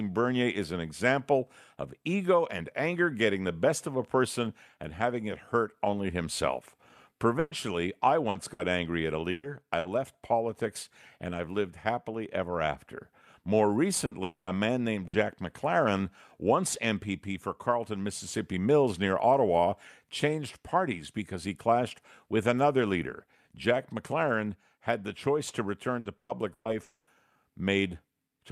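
Repeated packet loss (robotic sound) runs from 7.39 to 9.88 s, ending just before "politics and I've lived". Five separate holes open in the stream, the longest 120 ms. Each is papered over by extending the sound that came just before it, 420 ms of the audio in all, about a sixth of that stretch. The speech turns choppy and metallic, with small pieces missing.

A burst of packet loss follows at 14.05 to 14.14 s, a single 60 ms hole covered by stretching the last sound while turning it down, so it comes out as a brief held buzz or fading hiss. Right after it, from 14.23 to 14.50 s, the sound trails off into about 240 ms of fading continuation and then 120 ms of silence before speech resumes further on. That points to a long network dropout as the likely cause. A second burst of packet loss at 15.07 to 15.16 s repeats the pattern, a 60 ms concealed gap with the in-between audio gone.

Repeated packet loss returns from 25.99 to 26.68 s, right after "had the choice to". 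Three gaps, the longest 120 ms, fill 300 ms, nearly half the stretch. From 26.83 to 27.10 s, a fading continuation of about 240 ms dies into 70 ms of silence before the speech returns further on, which again fits a long network dropout as the likely cause.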